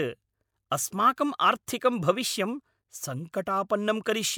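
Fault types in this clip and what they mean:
Nothing stood out on listening to this speech recording.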